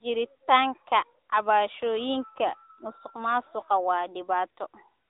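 From start to finish the speech carries AMR narrowband mobile codec damage. Nothing above about 3.8 kHz survives, so it sounds thin and phone-like. The codec rebuilds the voice from a vocal-tract model, giving a plainly audible buzzy, synthetic edge that fits a mid-range rate near 10.2 kbps.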